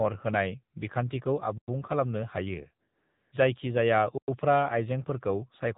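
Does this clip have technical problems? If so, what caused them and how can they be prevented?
Yes. The whole clip carries the sound of the AMR narrowband mobile codec. This speech was squeezed through an 8 kHz phone path, so nothing above 4 kHz survives, and at what sounds like a low rate (about 7.4 kbps) the vocal-tract model with its few pulses leaves the voice plainly buzzy and synthetic. On a spectrogram, all energy stops at a flat ceiling at 4 kHz. Keeping the call on a wideband codec such as AMR-WB or EVS, or at a higher AMR rate, prevents this.

From 2.88 to 3.32 s, after "खालामनो हायो" and before "जायखि जाया उफ्रा", there is AMR comfort noise. For about 440 ms the phone judged the talker silent and sent no speech frames, and the receiver filled that gap with generated hiss. On a waveform, the hiss appears as a flat, even band with abrupt edges. On a spectrogram, it shows as a smooth, featureless wash. 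Turning off discontinuous transmission or making voice activity detection less aggressive prevents this.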